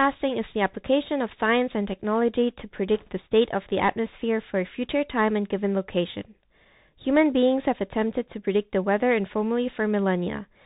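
Bluetooth CVSD headset codec, throughout: the speech is squeezed into a narrowband headset channel, consistent with 64 kbps CVSD, so nothing above 4 kHz survives. The one-bit delta coder's adapting step can't keep pace with loud, bright sounds, leaving scratchy s sounds, overload distortion and a granular hiss beneath everything.

Bit errors on a Bluetooth voice link, 2.94 to 3.10 s: for this brief stretch roughly one or two percent of bits are flipped. Because each CVSD bit nudges the signal only slightly and the error fades quickly, there are no sharp clicks, just a rushing, crackly burst of noise over the speech.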